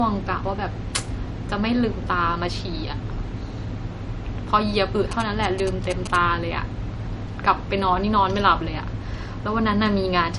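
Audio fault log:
throughout: low-bitrate audio saved at a high bitrate. The speech has nothing above 11.2 kHz and carries the coding artefacts of a coarse MP3 encode, which fits a file first made at around 48 kbit/s and then likely re-encoded as MP3 at a much higher rate such as 256 kbit/s. The second pass only preserved what was left. It could not restore the discarded high band or undo the first encoder's damage.
5.11–6.16 s: GSM signalling bursts. A galloping dit-dit-dit of short buzzes pitched near 217 Hz sits roughly 10 dB below the speech for about a second. A nearby 2G phone transmitting short groups of radio bursts while signalling, not carrying a call, is being rectified by the audio circuit. The pulsed transmission becomes an audible envelope at its 217 Hz frame rate.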